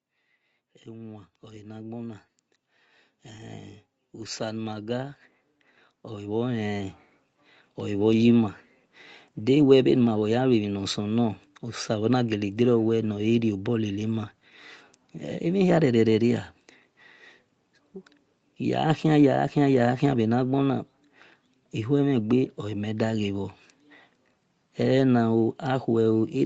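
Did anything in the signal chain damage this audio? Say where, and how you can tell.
Yes. The damage happens in the call processing stage, where automatic gain rising lifts the level steadily from 0.6 s to 15.5 s, by about 18 dB in all. The speech and the background noise floor swell together at the same rate, which shows the gain control kept raising its gain because it judged the input too quiet. A singer or speaker getting louder would raise only the voice, not the background with it. The missing content above 8 kHz comes from the codec's band limit, which fits Opus at 32 kbps.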